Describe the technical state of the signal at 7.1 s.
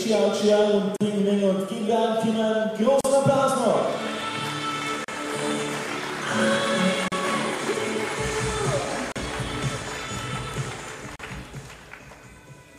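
From 7.08 to 7.12 s, a gap at a join of encoded pieces: untrimmed encoder padding leaves a 38 ms gap, a flat waveform and blank spectrogram stripe.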